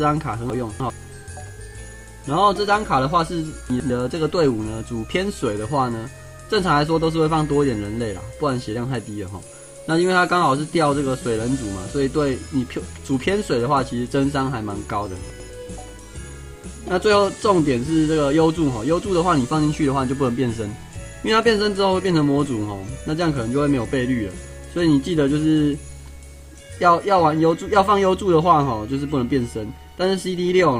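Chunks out of order at 0.5 to 0.9 s, 3.7 to 3.9 s and 15.3 to 15.5 s. A 100 ms chunk plays late, by three chunks first, then one. Each jumbles briefly.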